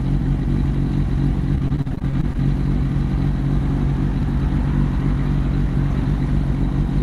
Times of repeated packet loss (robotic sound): 1.55-2.39

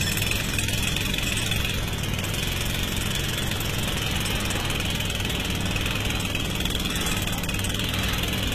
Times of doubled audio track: none

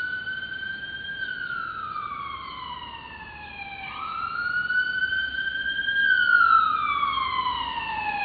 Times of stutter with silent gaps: none

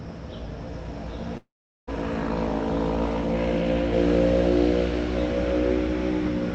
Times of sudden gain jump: none

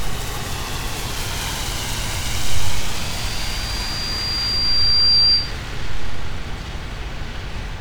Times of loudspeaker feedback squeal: 2.95-5.58

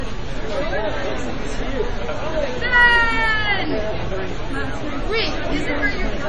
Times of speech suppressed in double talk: none

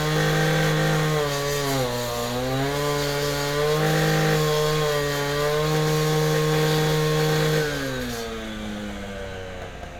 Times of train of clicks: none

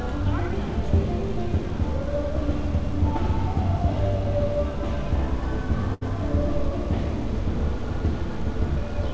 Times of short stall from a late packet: 5.94-6.03

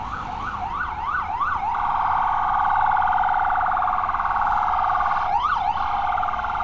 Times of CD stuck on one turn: none

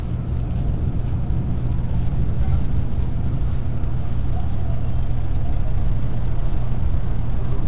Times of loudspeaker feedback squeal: none

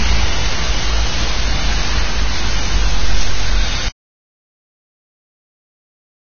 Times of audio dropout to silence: 3.88-6.34

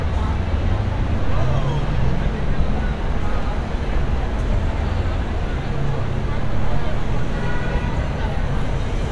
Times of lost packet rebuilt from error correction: none

